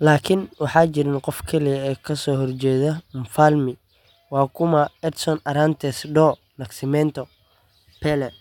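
Nothing technical goes wrong anywhere in this bit of speech, so there's no fault to point to at any moment.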